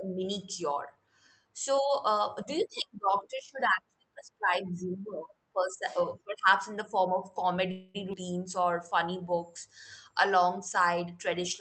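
From 7.71 to 7.96 s there is a call audio freeze. The last sound is stretched into a fading buzz for about 231 ms. Packets were likely held up, so the jitter buffer ran dry. When the audio resumes, nothing is lost. The speech is simply delayed.

At 8.12 to 8.15 s the playback skips ahead. About a tenth of a second of speech is dropped, and only a tiny 7 ms fill covers the seam. The two sides are joined almost directly, so the speech lurches forward abruptly.

From 8.60 to 9.53 s the jitter buffer slow-down stretches the speech. Single pitch periods and pause fragments are repeated to rebuild the buffer. About 91 ms is added. The speech plays at 91% speed with unchanged pitch, sounding drawn out.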